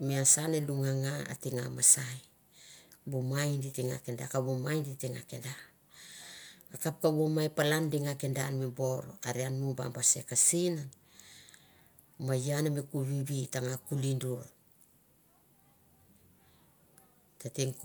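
No technical faults can be heard anywhere in the speech. Nothing interrupts or alters the audio at any point in the recording.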